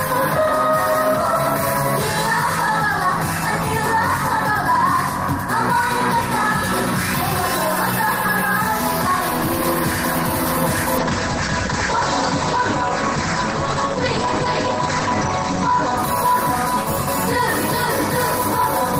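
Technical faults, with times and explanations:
10.99 to 16.57 s, call bitrate drop: the encoder was starved of bits, so for about 4.5 s the audio bandwidth shrinks from 20 kHz to 8 kHz and the sound turns muffled and coarse, a fall that points to something like 32 kbps dropping to 12 kbps. Unlike a plain low-pass filter, the texture itself roughens and turns watery, and unlike packet loss there are no gaps or glitches, just a sustained degradation that lifts when the rate recovers.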